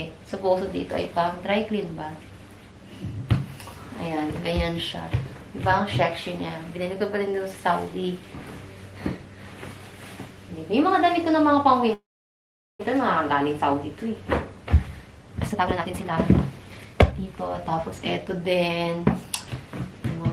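At 11.93 s the audio stops and a brief fading buzz or hiss gives way to about 780 ms of silence before resuming at 12.81 s exactly where it left off. That points to a call audio freeze, likely from packets delayed until the jitter buffer ran dry. Unlike a dropout, nothing is lost; about 0.86 s is inserted.

From 15.42 s to 18.25 s a jitter buffer speed-up plays the sound at about 130% speed, roughly a second trimmed in pitch-period slices to shrink the built-up delay. Pitch stays put, which separates this from a sped-up recording that would also rise in pitch.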